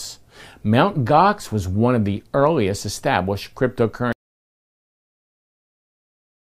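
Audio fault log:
4.13–6.50 s: audio dropout to silence. The speech cuts off abruptly mid-flow and never returns. The remaining 2.4 s are silent with no room tone, so the input likely disconnected or was muted while recording continued writing empty samples.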